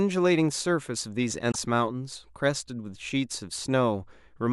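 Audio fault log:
1.48–1.56 s: damaged data in a compressed stream. A brief glitch breaks into the speech for about 80 ms. Corrupted bytes made the decoder misread those frames, lose sync and hunt for the next valid frame header.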